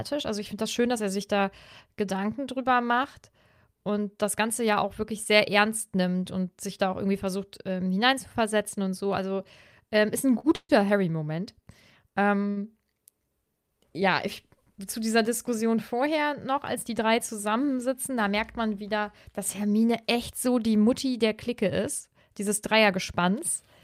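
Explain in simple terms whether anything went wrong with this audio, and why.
A few speech packets arrived late, causing short stalls from late packets at 10.39–10.47 s and 12.50–12.59 s, where the last sound is held about 40 and 60 ms too long.

A call audio freeze at 10.56–10.72 s was likely caused by packets held up in transit. The sound fades into a brief gap, including 40 ms of silence, then resumes.

A jitter buffer speed-up at 15.93–16.18 s trims tiny slices, roughly 40 ms in total, to cut the delay. The speech briefly runs about 13% faster at unchanged pitch.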